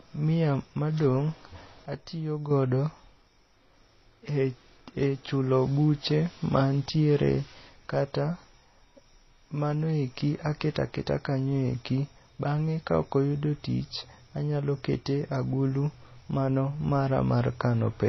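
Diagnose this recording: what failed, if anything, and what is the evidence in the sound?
Transcoding between lossy codecs runs through the whole speech clip, at the codec stage. Nothing reaches above 6.2 kHz, and two kinds of coding damage are heard together: a smeared, swirling texture sits over a brittle, band-limited top end. That combination likely comes from an MP3 encode at around 24 kbit/s being re-encoded as HE-AAC at a similar rate. The second encoder spends its few bits on the first one's artefacts, and the lower cut-off survives.

A sudden gain jump occurs from 1.86 to 2.51 s, in digital processing. The speech and the background noise drop together by about 7 dB, with no fade in or out, and both return to the earlier level just as abruptly. Because both fall by the same amount, the change happened to the whole signal, not to the talker. The likely cause is a gain setting or bit shift applied sample to sample with no ramp, then reverted.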